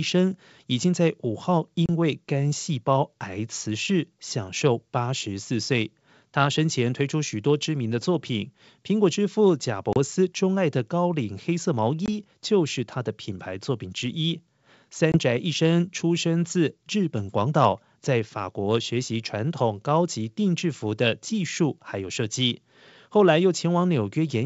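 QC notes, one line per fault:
1.86–1.90, 9.93–9.98, 12.06–12.09 and 15.12–15.18 s, packet loss on an ADPCM call: short silent holes of 20 to 30 ms, each the length of a few lost packets, after which the G.722 decoder's predictor and step size are briefly out of step with the sender's. The sound then comes back with a little distortion before settling.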